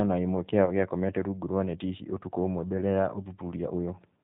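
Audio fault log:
Throughout: G.729 codec. The sound is band-limited, with nothing above 4 kHz. It has a rough, slightly synthetic grain that is plainly audible. This fits an 8 kbit/s G.729A stream. The codec keeps only a vocal tract filter, a pitch predictor and a few pulses in each short frame. It discards the fine detail of the waveform. Consonants lose crispness, and the speech takes on a synthetic, reconstructed quality.
0.65 to 0.71 s: VoIP packet loss concealed by the speech codec. This falls between "na ĩmwe kĩao" and "gĩakomete rungu rwa neti". About 20 ms of audio goes missing, which fits a single lost packet. The decoder fills the gap by extending its last pitch and filter at falling gain, so a brief buzzy tone or coloured noise replaces the real sound. Each frame builds on the previous one, so the speech stays weak or distorted until about 0.71 s.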